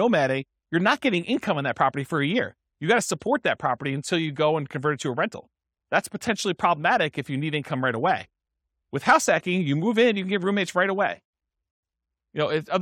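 No technical faults can be heard anywhere in the speech.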